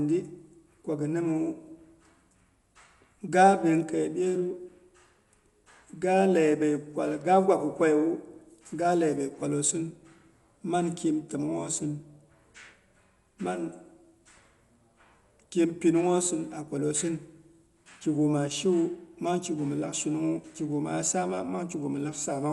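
Dolby Digital compression runs through the whole speech clip, and the damage is plainly audible. Nothing survives above 11.5 kHz, so the speech sounds dull and closed in, and a rough, fluttering grain clings to voiced tones. The likely cause is an AC-3 style encoder working at a low bitrate, which fits about 64 kbps: it narrowed the band and left many frequency lines without mantissa bits, and the decoder filled those gaps with dither noise.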